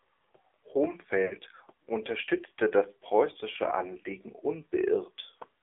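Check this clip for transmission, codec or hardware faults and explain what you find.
The clip has two transmission faults: AMR narrowband mobile codec coding throughout, and lost AMR speech frames at two points.

The AMR narrowband mobile codec (AMR-NB) limits the speech to a 300 Hz to 3.5 kHz band, and its damage is plainly audible. At such low bitrates, which here fit the 7.4 kbps mode, the encoder sends only a vocal-tract model and sparse pulses, so the voice turns buzzy and synthetic. On a spectrogram, the energy stops sharply at 3.5 kHz.

Lost AMR speech frames occur from 1.26 to 1.34 s and again from 3.52 to 3.55 s. The first gap is about 40 ms, which fits two 20 ms frames, and the second fits one. The decoder repeats the last good settings at falling gain, so each gap sounds like a brief warbling dip. On a waveform, the amplitude sags and then recovers.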